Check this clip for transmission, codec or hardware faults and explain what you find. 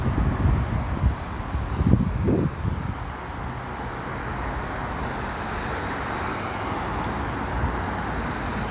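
No faults can be heard anywhere in this recording.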